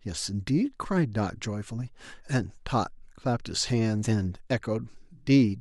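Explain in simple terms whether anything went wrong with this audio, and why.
Listening closely to the speech here, nothing stood out as having gone wrong at any point.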